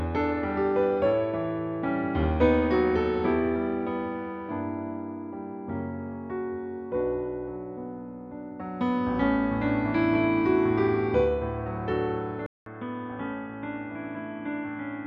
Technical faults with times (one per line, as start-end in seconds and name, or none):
12.46-15.07 input switched to a poorer device